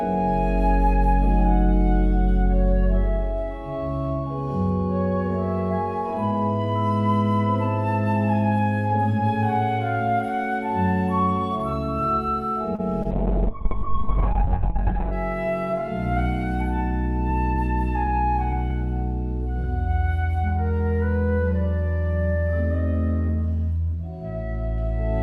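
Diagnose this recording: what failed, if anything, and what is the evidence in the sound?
The network stage produced a short stall from a late packet at 12.75 to 12.81 s. A packet arrived late, the jitter buffer ran dry, and the receiver held the last sound for about 33 ms before resuming where it left off. Nothing is lost, but playout delay grows by 33 ms.

A short concealed packet loss follows at 13.03 to 13.07 s, also in the network path. About 20 ms of audio never reached the decoder in time. The receiver extrapolated the preceding sound to cover the gap, leaving a brief smear before blending back into real audio.

Starting at 13.12 s, a call bitrate drop at the codec stage, driven by a collapsed bandwidth estimate, takes the encoder from 96 kbps to 6 kbps for about two seconds. Audio bandwidth narrows from 20 kHz to 4 kHz, so the sound turns muffled and coarse until it recovers at 15.18 s.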